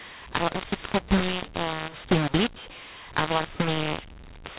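From start to finish the speech carries a mu-law and A-law mix-up. The audio points to telephone-band G.711 coding with A-law, with nothing above 4 kHz. It was then decoded as mu-law. Because the two logarithmic curves assign different amplitudes to the same 8-bit codes, levels come out scrambled. Some samples are too loud, others too quiet, and the smallest values are pushed well above silence. The speech sounds distorted throughout, and pauses fill with noise instead of going quiet.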